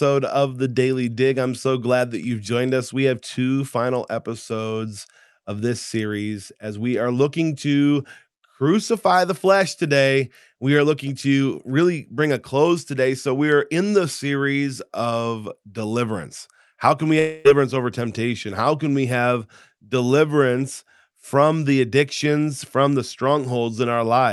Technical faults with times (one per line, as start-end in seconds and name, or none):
17.19-17.47 long network dropout